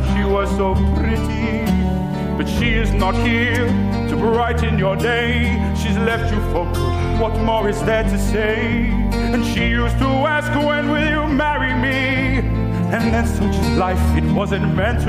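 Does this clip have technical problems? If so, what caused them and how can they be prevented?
No, the signal shows no technical faults, so there is nothing that needs preventing.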